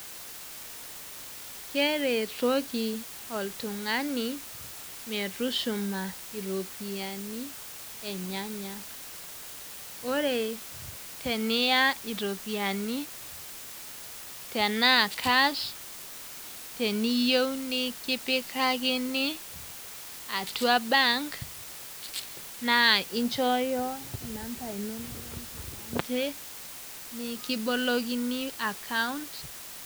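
Throughout, low bit depth with dither, consistent with 6-bit samples, turns rounding error into a constant, even hiss about 15 dB below the speech.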